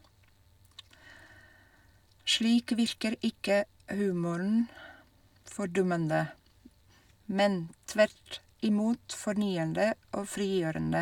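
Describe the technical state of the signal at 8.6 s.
At 8.6 s the speech signal is intact, with no dropout, clipping, glitch or other audible fault at that moment.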